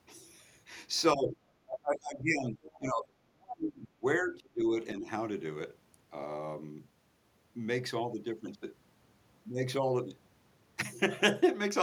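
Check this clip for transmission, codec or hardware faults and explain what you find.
Two faults are present in the speech, both tied to echo cancellation during overlapping talk.

Speech suppressed in double talk occurs at 1.15 to 1.42 s, 1.64 to 2.61 s, 2.77 to 4.04 s, 4.22 to 4.73 s and 4.95 to 5.07 s. The talker dips by roughly 10 to 35 dB, deepest in the longest stretch. The likely cause is an echo canceller that could not tell the talker from the far side and attenuated both.

The other side's voice leaking through appears at 2.63 to 2.78 s, in the gap between two suppressed stretches. It is a faint second voice, roughly 25 dB below the speech. The likely cause is loudspeaker echo that the canceller failed to remove fully from the microphone signal.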